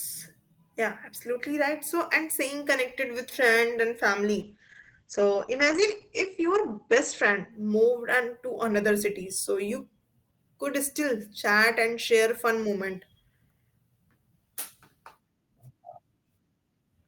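From 4.42 to 9.31 s there's a call bitrate drop. The encoder seems starved, sliding from roughly 32 kbps to about 9 kbps, so the top end closes from 20 kHz down to 8 kHz. For about 1.8 s the speech sounds muffled and watery before recovering.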